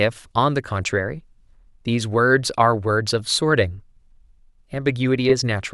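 Repeated frames: the stream sent a block of compressed speech twice, so the decoder plays it again. At 3.19 s a 10 ms repeat makes a stutter. From 5.29 to 5.33 s a 30 ms run replays as a brief stutter, consistent with three short frames.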